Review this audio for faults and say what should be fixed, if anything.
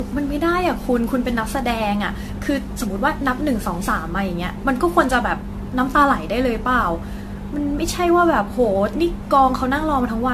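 Generation loss runs through the whole speech clip. The sound is swirly and hollow, consonant attacks are smeared, and nothing remains above 14 kHz. The damage is heavier than a single encode at the rate this band limit points to, roughly 64 kbit/s AAC-LC. The likely cause is that the audio was decoded and re-encoded around seven times. Each pass quantised on a shifted frame grid, so noise and spectral holes piled up. To prevent it, keep masters in a lossless format and apply a single lossy encode only at final delivery.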